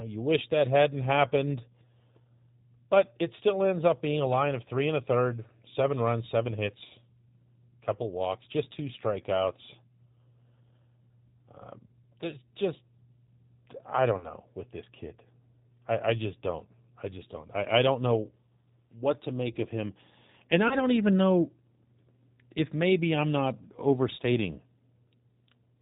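Throughout the speech, the sound carries plainly audible G.729 codec damage: nothing above 4 kHz survives, and the voice has the slightly rough, synthetic texture of speech rebuilt from a vocal tract filter, a pitch predictor and a sparse set of pulses per 10 ms frame. The coarseness is consistent with an 8 kbit/s G.729A stream.

At 14.18 to 14.31 s, just before "with this kid", VoIP packet loss concealed by the speech codec appears. About 30 ms of audio is missing, which fits a single lost packet. The decoder fills the hole by extrapolating its last pitch and filter state at falling gain, so the sound is briefly stretched and fades. Because each frame builds on the previous one, the distortion lingers for about 130 ms in total.

The same concealment recurs at 20.68 to 20.77 s, just before "don't even know". Again about 30 ms is lost, and the recovery is shorter, with the weakened stretch lasting about 90 ms before the voice returns to full level.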